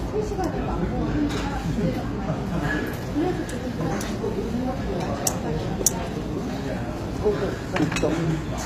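Throughout the clip the treble sounds gritty and metallic rather than dull, with nothing above 15.5 kHz. That points to HE-AAC compression, likely at a rate around 24 kbps. The upper band is rebuilt by copying lower bands upward, so its harmonics misalign. A plain low-pass would simply muffle.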